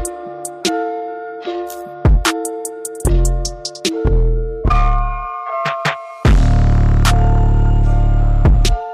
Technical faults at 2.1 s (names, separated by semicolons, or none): hard clipping